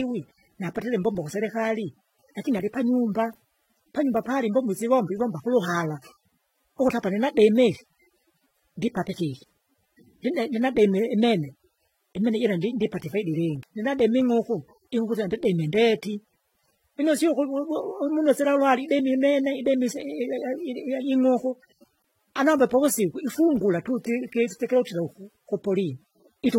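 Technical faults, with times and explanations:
Throughout: transcoding between lossy codecs. The speech carries two sets of compression artefacts at once, with nothing above 16.3 kHz. The likely cause is a chain in which a low-rate AAC-LC encode, around 27 kbit/s by its character, was decoded and encoded again as HE-AAC at a similarly low rate. The second encoder spends its bits copying the first one's artefacts and then adds its own, so both layers stay audible.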